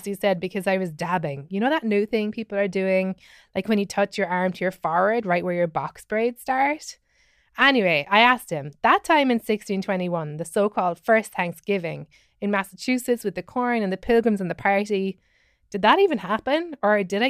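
No technical faults can be heard in the speech at any point.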